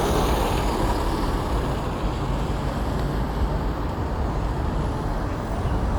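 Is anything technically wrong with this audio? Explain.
No, no technical faults heard.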